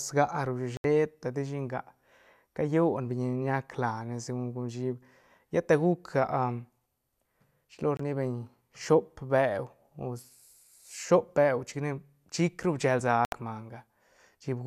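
Digital broadcast dropouts cut this speech at 0.77–0.85 s, 7.97–8.00 s and 13.25–13.33 s. Each time the receiver muted when frames failed, leaving abrupt silent holes of 72 ms, 24 ms and 72 ms, which fits three, one and three lost frames.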